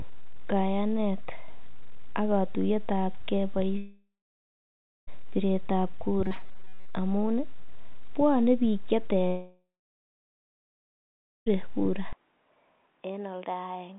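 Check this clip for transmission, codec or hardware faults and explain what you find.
Four faults are audible in a narrowband call that cuts off everything above 4 kHz.

Long network dropout, 3.78 to 5.09 s and 9.27 to 11.48 s: packets likely stopped arriving, so about 1.3 s after "ab ge" and about 2.2 s after "bwone biik che" are lost. A fading fill then gives way to silence before "piret ab" returns.

Robotic sound from repeated short buffers, 6.24 to 6.95 s: audio likely arrived too seldom, so most of this stretch repeats short fragments, imposing a rigid metallic buzz at 188 Hz.

Input switched to a poorer device, 12.13 s to the end: the input likely changed with no gap. Sound drops about 10 dB, turns narrower and duller, and gains a new noise floor.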